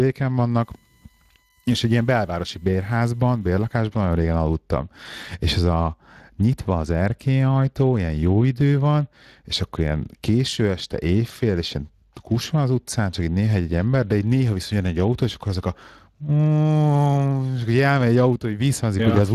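From the start to the end you've got Speex codec damage, and it's plainly audible. The CELP coder is starving the excitation, so the speech comes out hoarse and grainy. The bandwidth stops at about 15.4 kHz, which fits a setting of roughly 22 kbps.

Then from 0.61 s to 3.77 s there's a USB whine on top: a steady tone built on 1 kHz, loudest at its 7 kHz harmonic. It's faint, around 40 dB under the speech, and it's the bus's 1 ms frame rate bleeding in through power or ground.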